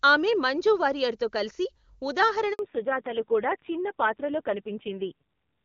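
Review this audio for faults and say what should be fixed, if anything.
At 2.53 s the speech fades out within a few tens of milliseconds and stays silent until 2.59 s, a 60 ms handover gap. The call was moved from one network to another, and no speech frames arrived during the switch, so that slice of speech is gone. Packet-loss concealment would fill a gap with a smeared, buzzy repeat of the previous sound. This gap is clean silence, and the audio comes back with a different bandwidth, which marks it as a network switch.

From 2.59 s to the end, there is a fallback to narrowband. Before the gap, the HD Voice wideband codec carries the upper speech range. After it, nothing above 4 kHz is left, and the speech sounds duller and also rough and raspy. That roughness points to a low narrowband coding rate, around 5.9 kbit/s. A plain low-pass filter or a poor microphone would only dull the sound. 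Here the grainy coding texture arrives along with the lost top end, and both begin exactly at the handover.

To prevent this, the handover path should keep the HD Voice codec on the new network, and the network should buffer or pre-establish the target link so that no frames are dropped during the switch.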